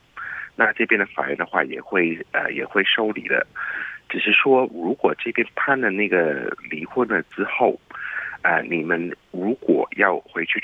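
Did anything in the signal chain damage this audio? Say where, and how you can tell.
No, nothing along the chain has audibly damaged this audio, and the signal shows no disturbance at any point that would trace back to a particular stage.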